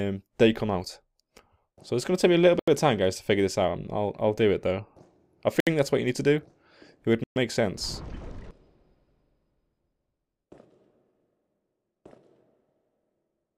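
Bluetooth stalls at 2.59 to 2.68 s, 5.60 to 5.67 s and 7.24 to 7.36 s drop the sound to silence for 82, 67 and 122 ms before it resumes. The likely cause is interference delaying packets until the headphones' buffer emptied.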